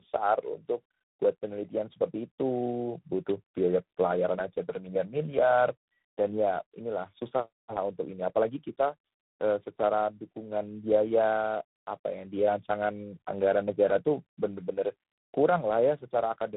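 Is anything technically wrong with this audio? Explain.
Yes. Throughout, there's tandem speech coding: the speech sounds like it went through a low-rate coder like G.729A, then mu-law, then re-encoded with something like G.726. Each coder mangles the last one's output, so it's rough, muffled, warbly, and dead above 3.9 kHz.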